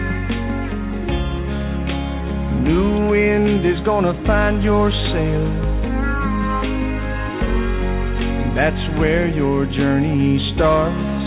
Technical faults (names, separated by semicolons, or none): none